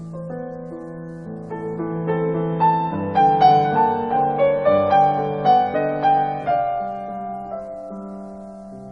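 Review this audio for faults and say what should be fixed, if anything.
Nothing in this audio needs fixing. No faults turn up anywhere in the clip, so no changes are called for.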